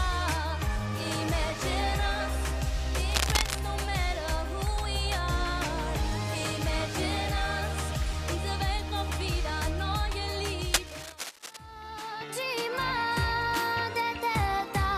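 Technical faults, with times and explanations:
3.09 to 3.59 s and 10.73 to 11.57 s, cable scratch noise: two bursts of dense, ragged scratching lie over the sound, the first about as loud as the sound itself and the second a little quieter. The likely cause is a worn cable, connector or control being moved, with its contact resistance fluctuating quickly. Unlike isolated digital clicks or low, thumping handling noise, each burst is a continuous, uneven rustle lasting half a second or more.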